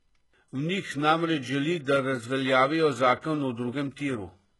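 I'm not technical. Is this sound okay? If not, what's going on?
No. Throughout the speech, the s sounds come out gritty and metallic, and nothing rings above about 11.5 kHz. That is likely HE-AAC compression. Unlike simply muffled audio, the treble stays bright, but it has been rebuilt from lower sounds rather than kept.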